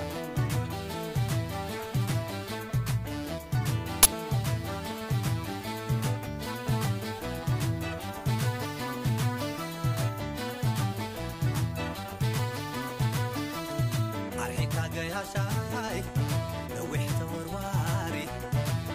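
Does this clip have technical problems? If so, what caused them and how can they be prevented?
Yes. An uninitialised buffer plays from 4.03 to 4.05 s. Leftover memory was output as samples for 23 ms, which fits a 1024-sample buffer. Prevent it by zero-filling buffers before playback starts.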